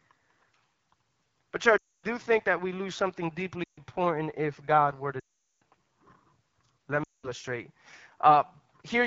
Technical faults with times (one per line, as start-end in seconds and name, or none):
0.00-9.06 AMR wideband (HD Voice) codec
1.78-2.05 lost AMR speech frames
3.63-3.80 lost AMR speech frames
5.19-5.62 lost AMR speech frames
7.04-7.30 lost AMR speech frames